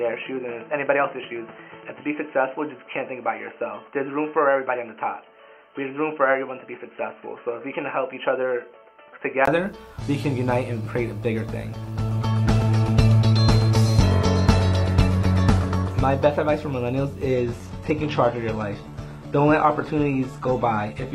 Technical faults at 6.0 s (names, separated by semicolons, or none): input switched to a poorer device